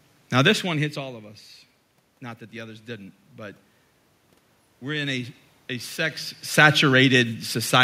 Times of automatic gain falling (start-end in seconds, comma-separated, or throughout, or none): 0.32-1.17, 6.44-7.79